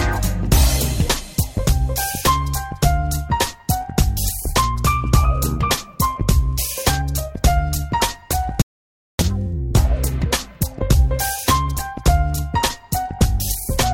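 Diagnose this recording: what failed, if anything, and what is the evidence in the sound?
The audio drops out to silence from 8.62 to 9.19 s, about 0.58 s of silence with no room tone, then returns mid-flow. Unlike a gate or fade, nothing tapers. The likely cause is input lost at the device or link while the recorder kept writing zeros.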